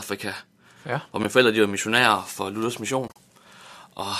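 Speech with two soft-edged dropouts: a brief gap at 1.24 s between "ja hvor" and "forældre de var missionærer", then broken holes from 3.08 to 3.16 s, the longest about 40 ms. This is AAC frame loss with muting, the decoder zeroing lost frames of what is likely light low-delay AAC compression.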